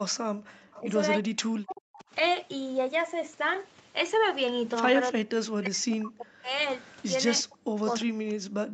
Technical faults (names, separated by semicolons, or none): speech suppressed in double talk; echo leak